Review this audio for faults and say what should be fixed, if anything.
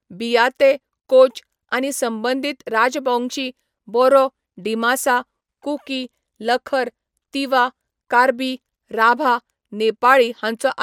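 Nothing here needs fixing, since no technical faults turn up anywhere in the recording.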